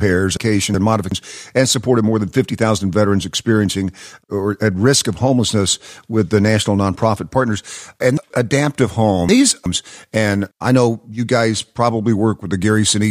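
Right near the start, from about 0.37 to 1.12 s, there's a case of chunks out of order. A roughly 0.37 s block of audio plays one slot late, after the chunk that should follow it, just before "and supported more than". Nothing goes missing, but that stretch sounds jumbled, with three hard joins. It happens again from 8.17 to 9.66 s, just before "and I know you", where a chunk lands three slots late, so a longer passage gets scrambled.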